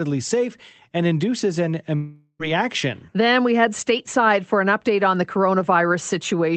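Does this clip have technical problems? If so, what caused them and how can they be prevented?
Yes. A long network dropout, likely from packets that stopped arriving between 1.95 and 2.42 s, lost about 440 ms of audio. The receiver stretched the last sound into a fading buzz, then about 50 ms of silence, before the sound resumed with that stretch gone. A steadier network connection, plus forward error correction or redundant packets, would prevent it.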